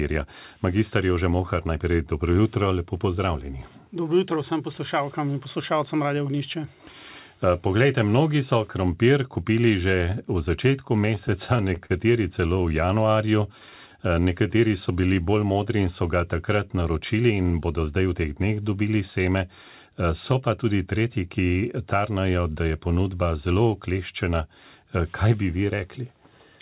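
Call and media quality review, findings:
Repeated stalls (stutter), 11.06 to 11.92 s. Seven short hitches, longest 38 ms, about 95 ms filled in total, nothing lost. Jitter buffer ran dry repeatedly on late packets. Receiver extended the last sound each time. Audible drag and stutter.

Jitter buffer slow-down, 12.68 to 13.13 s and 13.53 to 15.23 s. Playback at 93% then 92% speed, pitch unchanged. Buffer rebuilding reserve by repeating pitch periods. Adds 42 ms and 146 ms. Drawn-out sound.

Jitter buffer speed-up, 17.14 to 18.38 s. Playback at 114% speed, same pitch, sounds hurried. Buffer over target, likely after a burst of delayed packets. Receiver trimmed short pitch-period pieces, removing roughly 0.2 s.

Band limit: nothing above 4 kHz across the clip, which fits a G.711 call codec.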